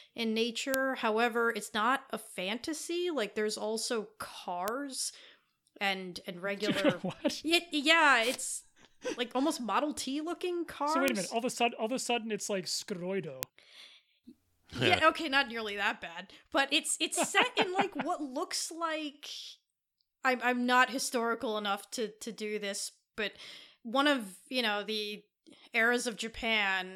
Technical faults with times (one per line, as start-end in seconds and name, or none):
0.74 bit error spike
4.68 bit error spike
11.08 bit error spike
13.43 bit error spike